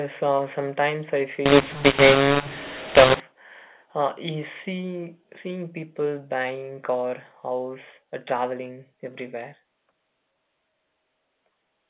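From 1.46 to 3.20 s, after "uh sometimes I", mu-law and A-law are mixed up. A-law coded speech is decoded as mu-law. Levels scramble, so speech turns harsh and gritty, and pauses fill with noise.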